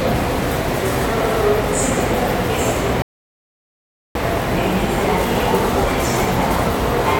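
At 3.02 s the sound cuts abruptly to silence and stays silent until 4.15 s, a rebuffering stall. Playback used up its downloaded audio and halted for 1.13 s until more data arrived. When it resumes, the sound picks up exactly where it broke off. What sets this apart from a dropout is that nothing is missing: no material is skipped, and the gap simply adds 1.13 s to the total running time.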